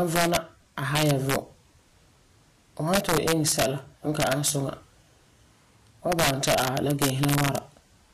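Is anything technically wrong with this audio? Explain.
Yes, two problems. Throughout, the speech sounds clearly hissy and grainy, with roughened tones, blurred attacks and nothing above 14.1 kHz. That's likely Vorbis compression at a low setting, which fits a bitrate around 40 kbps: the treble detail gets quantised so coarsely it turns into noise.

There's also integer overflow at 0.16–0.37 s, 0.96–1.36 s, 2.94–3.65 s (ending just before "n ka"), 4.20–4.50 s (right after "n ka") and 6.12–7.58 s. Peaks pushed about 4 dB past the limit, about 2 dB in the second stretch, wrap to the opposite sign instead of being limited, giving cracks much sharper than ordinary clipping.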